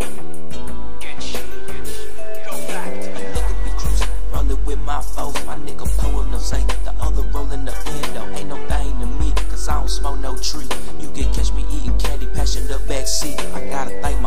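Throughout the audio, the waveform sits off centre with a DC offset of about -10 dBFS: a constant shift that eats headroom on one side and shows as a steady 0 Hz spike in the spectrum. Unlike rumble or hum, it adds no audible tone or fluctuation.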